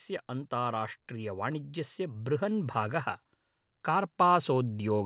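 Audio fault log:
0.27–3.06 s, automatic gain rising: the level creeps up by about 6 dB over nearly three seconds, and the voice and the room noise swell together, which is the giveaway. The AGC judged the input too quiet and kept turning it up gradually rather than in one step, so nothing clicks. It just slowly gets louder. This all sits on top of a call path with nothing above 4 kHz, which fits a G.711 narrowband codec.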